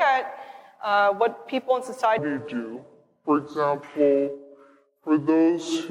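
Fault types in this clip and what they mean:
section at the wrong speed: From 2.19 s to the end, the sound plays at 0.677 times its proper speed. It turns slow and deep, about seven semitones lower. Pitch and tempo drop together. This likely comes from playback on a mismatched clock.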